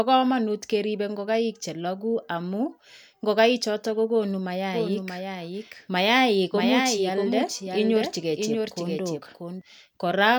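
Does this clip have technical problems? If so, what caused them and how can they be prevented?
Yes. From 4.74 to 9.62 s, just after "ngo'kai choton kokonuu", a doubled audio track appears: a somewhat quieter full-band copy trails by roughly 0.7 s. It starts and stops abruptly with no decay, which distinguishes it from echo or reverb. The likely cause is a second, slower capture path or misaligned duplicate edit. To prevent it, route each source through only one path and check edits for overlapping copies.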